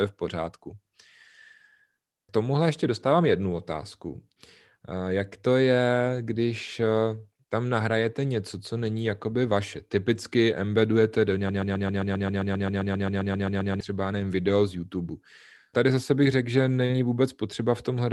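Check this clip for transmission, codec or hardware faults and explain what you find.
Two faults turn up in this speech, which comes through a call path that sounds band-limited to around 12 kHz, consistent with Opus at roughly 32 kbps.

From 11.49 to 13.81 s there's a broken-record loop: a 132 ms fragment repeats 17 times back to back, likely from a stalled stream resending its last buffer.

At 16.85 to 16.91 s there's short concealed packet loss: about 40 ms went missing, and the receiver extended the preceding sound to cover it, leaving a brief smear.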